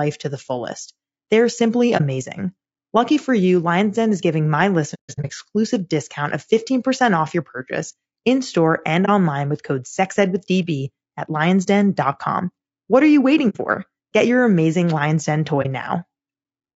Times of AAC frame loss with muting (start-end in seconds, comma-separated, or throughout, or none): 1.97-2.01, 4.94-5.31, 9.05-9.09, 11.63-11.68, 13.49-13.57, 15.62-15.66